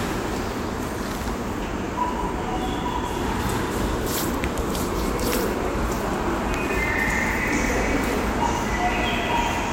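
There are no technical faults to describe in time order anywhere in this audio.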